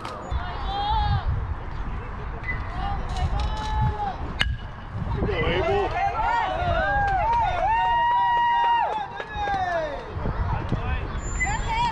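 No technical faults can be heard anywhere here.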